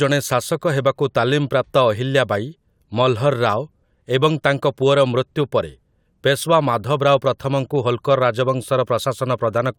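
Speech recording with no technical fault audible anywhere in it.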